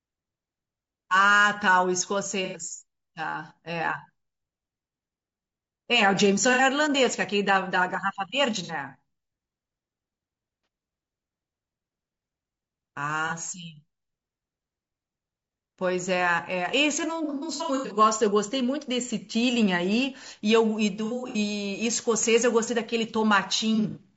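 Throughout the speech, the sound is rough and grainy, with noise filling the gaps between harmonics and a thin, synthetic top band. This is likely low-delay AAC compression (AAC-ELD), whose short frames resolve pitch poorly and which points to a low bitrate near 32 kbps.

AAC frame loss with concealment appears as smeared, phasey patches where the decoder stretched the last good spectrum over missing audio. Short gaps occur at 2.45 s (90 ms), 6.53 s and 8.63 s (60 ms each), and at 10.64 s and 13.28 s (30 ms each). Longer scattered bursts come at 17.24 to 17.98 s (390 ms lost, runs up to about 100 ms), 21.05 to 21.38 s (180 ms), and 23.75 to 24.01 s (120 ms).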